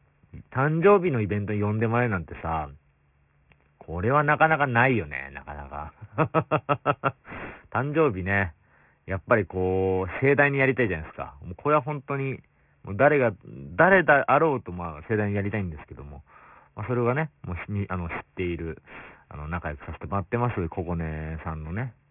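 Aliasing runs through the whole clip: the speech was taken down to a 6 kHz rate without a proper low-pass filter. So energy above 3 kHz folds back as gritty, metallic sibilance, roughly 15 dB below the signal.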